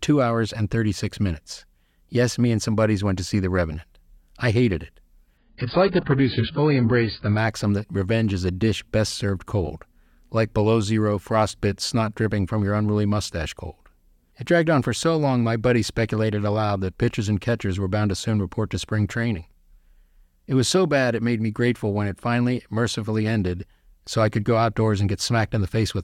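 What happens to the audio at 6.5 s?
At 6.5 s the audio is inside a spell where the adaptive stream dropped to a lower bitrate, from 5.37 to 7.37 s, between "I hated it" and "that revenge is a". With no gap, everything above about 5.1 kHz disappears and coding artefacts thicken, which fits a fall to roughly 12 kbit/s AAC.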